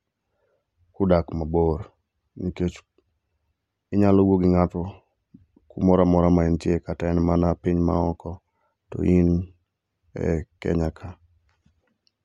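No audible technical faults turn up anywhere in the recording: no dropouts, clicks, distortion or timing breaks.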